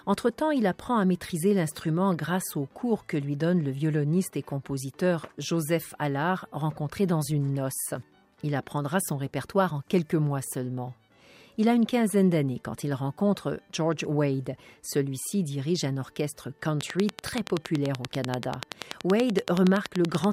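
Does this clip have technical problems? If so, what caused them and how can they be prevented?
Yes. Something, likely electrical interference from nearby equipment or a faulty connection or power supply, kept injecting the same short pulse into the signal from 16.81 s to 20.25 s. This produces a train of clicks: about 40 evenly spaced ticks at 10.5 per second, sitting well above the sound. To prevent it, route cables away from noisy equipment and use a stable, properly powered interface.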